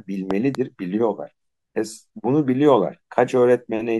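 At 0.31 s and again by 0.57 s, a loud pop arrives as two sharp thumps, roughly 10 dB above the speech, which continues underneath. A likely voltage pulse from a plug, switch or static shows as tall waveform spikes and full-height vertical spectrogram stripes.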